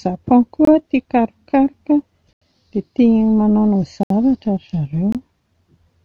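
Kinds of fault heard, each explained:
Block of digital silence: a run of samples drops to silence with no fade in or out, so the speech cuts off and returns abruptly. It occurs four times, at 0.65, 2.33, 4.03 and 5.12 s. The gaps at 0.65 and 5.12 s each last about 23 ms, which fits a 1024-sample buffer not filled in time. Those at 2.33 s (86 ms) and 4.03 s (70 ms) are heard as short holes.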